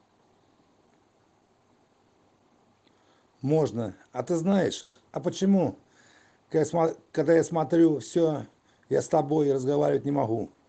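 A call audio freeze runs from 4.81 to 4.96 s. The last sound is stretched into a brief fading buzz for about 140 ms, likely because delayed packets left the jitter buffer empty. The audio then resumes where it stopped, so nothing is lost, only delayed.

A jitter buffer speed-up follows from 9.90 to 10.64 s. The receiver trimmed a backlog by cutting pitch-period-sized slices, roughly a tenth of a second in total. The sound plays at about 111% speed with unchanged pitch and comes across as hurried.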